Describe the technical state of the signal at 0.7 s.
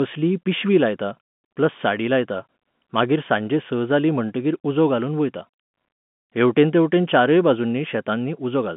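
At 0.7 s the audio is intact, carried over an ordinary telephone line coded as G.711 with its band limited to roughly 150 Hz to 3.5 kHz and no fault audible.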